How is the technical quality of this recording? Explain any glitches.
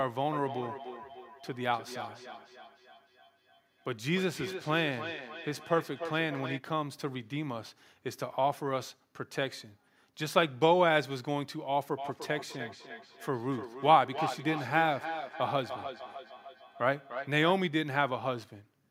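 The recording has audible feedback echo between two devices, from 0.33 to 6.63 s and again from 11.97 to 17.57 s. Another device in the room replays the call and this microphone picks it up again, which its own echo canceller cannot remove. Each word returns roughly every 0.3 s, thinner and ringing, peaking at about 12 dB and then about 10 dB below the speech.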